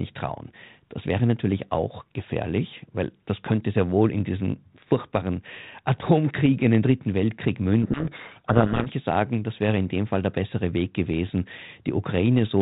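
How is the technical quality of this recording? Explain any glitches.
The audio is telephone-band speech with a light ADPCM coloration, consistent with 32 kbit/s G.726, plus one clear glitch. From 7.82 to 8.87 s, just before "sagen das wäre in", there's a codec payload misread. The G.726 code words arrive with their bit order swapped, so the decoder takes them as wrong prediction differences, and the speech gets buried under harsh, grinding distortion until the packing lines up again.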